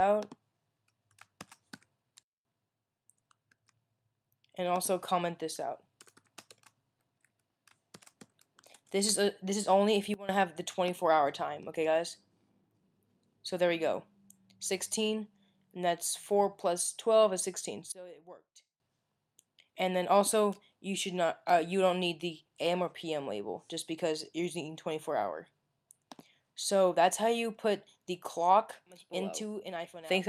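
The sound and its background noise drop abruptly together, by about 23 dB from 2.23 to 2.45 s, about 18 dB from 10.14 to 10.29 s and about 20 dB from 17.92 to 18.8 s. These are sudden gain jumps, likely digital gain switched instantly without a ramp.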